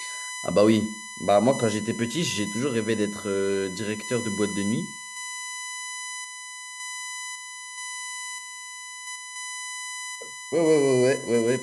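A USB whine runs through the whole speech clip, from start to finish. It is a steady tone pitched at 1 kHz. Its strongest part sits at the harmonic of 2 kHz. The pitch never drifts. That points to the USB bus drawing current in 1 ms frames. The pulses leak into the audio through the power or ground wiring. The whine is loud, only around 10 dB below the speech.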